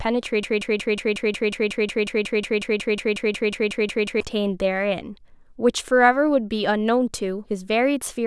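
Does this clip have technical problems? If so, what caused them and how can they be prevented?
Yes. From 0.43 to 4.20 s a 0.18 s fragment of speech repeats 21 times: a broken-record loop, likely from a stalled stream replaying its last buffer. To prevent it, have the player output silence or conceal the gap on a stall instead of looping stale data.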